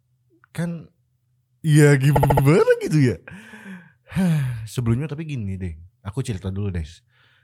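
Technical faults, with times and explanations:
2.15–2.44 s, repeated frames: the same 72 ms chunk of speech comes round four extra times, a quick stutter that stretches the audio by 288 ms.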